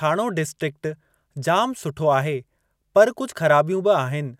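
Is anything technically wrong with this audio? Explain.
No, nothing is technically wrong with this audio.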